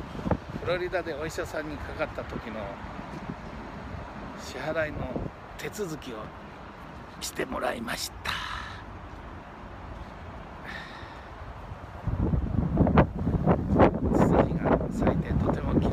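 No technical faults can be heard anywhere in the audio.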